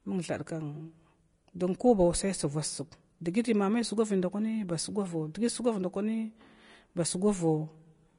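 Low-bitrate Vorbis compression is the likely cause of the damage running through the whole speech clip, with a coarseness that points to an encode of around 33 kbps. The encoder has discarded everything above 10.6 kHz and quantised the remaining upper band so roughly that its fine detail turns into noise of similar energy. The result is a hissy, grainy top end, roughened tones and softened consonant onsets, plainly audible from start to finish.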